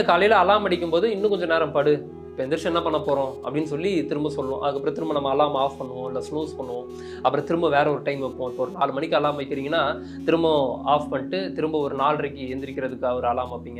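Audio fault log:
Throughout: computer activity noise. A pulsing noise sits under the sound for the whole clip. It repeats at around 200 pulses per second. Its level is roughly 40 dB below the sound. The noise does not track the sound itself. It comes from the computer. As the processor, graphics card or mouse change their load, the current they draw shifts the ground shared with the audio circuit. That shift leaks into the signal as noise.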